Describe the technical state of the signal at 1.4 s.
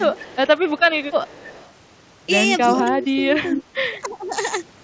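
A faint, delayed copy of the speech trails the main signal from 1.26 to 1.71 s, lagging by about 292 ms and sitting well below it. This is an echo leak, likely from a far-end loudspeaker whose echo canceller let some pickup return down the line.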